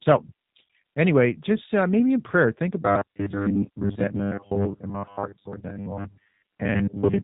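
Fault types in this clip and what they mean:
G.729 codec, throughout: The speech is carried through a low-rate codec that rebuilds it from a vocal tract filter, a pitch predictor and a handful of pulses per frame rather than from the original waveform. The damage is plainly audible as a rough, synthetic texture consistent with G.729A at about 8 kbit/s, and nothing survives above about 3.8 kHz, so the sound is dull and band-limited.
Robotic sound from repeated short buffers, 2.82 to 7.23 s: From here to the end the speech turns into a rigid, metallic buzz at 100 Hz that only roughly follows the original. Most of the audio in this stretch is a repeated short slice rather than fresh material, which fits a 10 ms buffer being replayed over and over. The likely cause is new audio arriving too seldom, with the software looping the last buffer while the real audio is skipped.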